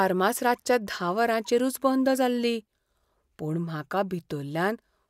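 No technical faults can be heard in this speech recording, so there is nothing to describe in time order.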